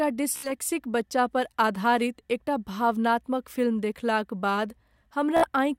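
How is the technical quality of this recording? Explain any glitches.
Two brief dropouts mar the speech. Bluetooth stutter occurs at 0.37 to 0.51 s, just before "बच्चा पर आधारित एकटा", and again at 5.37 to 5.48 s. Late or lost packets made the receiver replay its last short buffer, producing a rapid machine-gun buzz. Speech then resumes about 61 ms further on, which fits roughly four lost packets.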